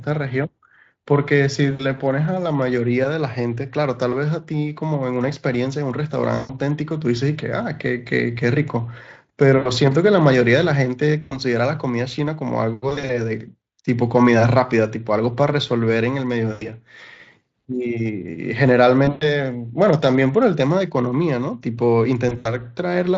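VoIP packet loss concealed by the speech codec occurs at 1.71, 6.35, 9.57, 11.21, 12.89, 16.51, 19.05 and 22.29 s. Each loss lasts 80 to 140 ms. The Speex decoder extrapolates over the gaps, so the speech smears into a brief buzzy tone or coloured noise that fades.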